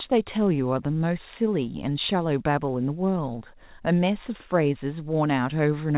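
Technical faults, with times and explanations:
No technical faults can be heard in this speech.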